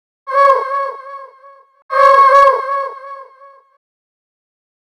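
Hard clipping at 0.41–0.50 s and 1.99–2.48 s, overdriven by about 2 and 3 dB: flat-topped waveform peaks, crackle on peaks, and harmonics smeared high up the spectrogram.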